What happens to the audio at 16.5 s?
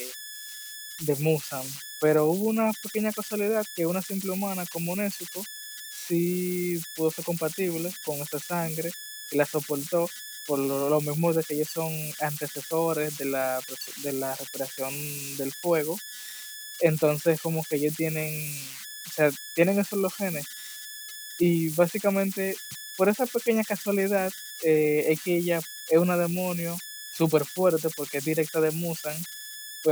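At 16.5 s the speech carries converter idle tones, present throughout the clip. An undithered delta-sigma converter settles into repeating bit patterns on small input, producing a whistle around 1.5 kHz, about 13 dB below the speech. Unlike fixed-pitch mains hum, this tone shifts with the input's offset.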